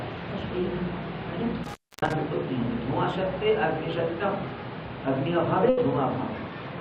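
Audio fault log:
1.64–2.13 s, intermittent contact: sound cuts out for about 281 ms with crackle at each edge and faint hiss, as a loose cable or plug briefly opens.
5.69–5.79 s, burst of packet loss: the last sound is held and fades for 80 ms, then resumes 80 ms further on, because late or lost packets were concealed.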